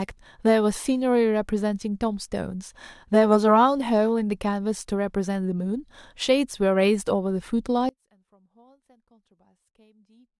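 At 7.89 s the speech drops out abruptly and stays gone to the end, leaving only a faint sound, roughly 35 dB down. It is likely an audio dropout to a faint residue. The instant cut, with the path still live, separates it from a pause or fade.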